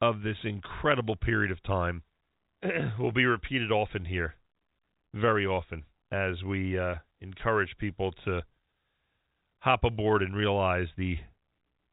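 Nothing is technically wrong with this speech clip; it carries the band-limited sound of G.711 telephone coding, with nothing above about 3.8 kHz, as that format should.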